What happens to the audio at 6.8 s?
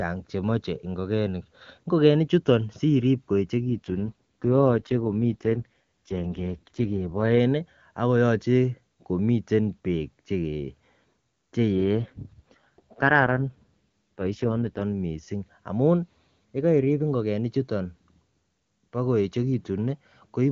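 At 6.8 s the speech sits inside an AMR rate drop that runs from 3.6 s, just after "chuton sirib", to about 7.39 s. The link forced the codec down from its clear HD Voice rate to a much lower one, and the rough, raspy timbre fits roughly 6.6 kbit/s. On a spectrogram the upper band edge holds steady and the waveform shows no gap, but the harmonic striations blur into grainy noise until the rate recovers.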